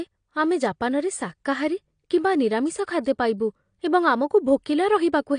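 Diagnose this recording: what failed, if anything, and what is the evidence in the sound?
AAC compression damage, present from start to finish, places the failure at the codec stage. The speech sounds dull and smeared, with nothing above about 9.8 kHz and a fizzy, warbling texture on sibilants and sustained sounds. The likely cause is an AAC-LC encode at a low bitrate, consistent with around 32 kbps. Starved of bits, the encoder lowered its cut-off and quantised the frequency lines coarsely, leaving gaps that read as swirl.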